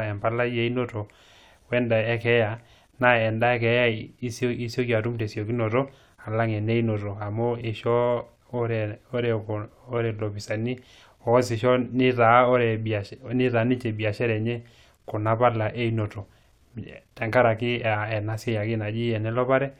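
No technical faults detected.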